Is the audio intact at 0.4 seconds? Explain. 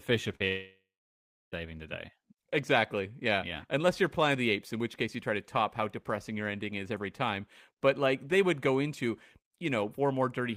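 No. At 0.4 seconds the speech is replaced by a short held buzz or fading hiss lasting from 0.35 to 0.42 s. When the speech returns, about 40 ms of it is simply gone. This is a burst of packet loss: a short run of packets never arrived in time. The receiver filled roughly 45 ms by repeating the last sound and turning it down, then jumped ahead to the next audio that did arrive.

Just after that, from 0.48 to 1.66 s, the speech breaks again into a longer fading buzz or hiss that sinks into about 0.7 s of silence. It comes back at 1.66 s with about a second of speech missing. The likely cause is a long network dropout: nothing arrived for over a second, so the receiver stretched the last sound, let it die away, and went quiet until packets resumed.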